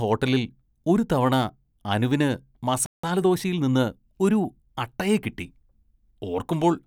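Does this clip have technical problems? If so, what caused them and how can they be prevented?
Yes. At 2.86 s the player was likely starved of data or had its audio thread blocked, so nothing reached the output until it recovered at 3.03 s. The result is a playback stall: the speech cuts out mid-flow for about 170 ms, then resumes where it left off. A larger jitter buffer and keeping the audio thread free of blocking work would prevent this.

From 3.03 s to 4.77 s the player drained the backlog built up during the stall by trimming small slices of audio and cross-fading across the joins. This time-compressed catch-up plays the speech at 1.1 times normal speed while keeping its pitch, so it sounds slightly hurried. Avoiding the stall in the first place, or catching up by dropping silent stretches instead of compressing speech, would prevent it.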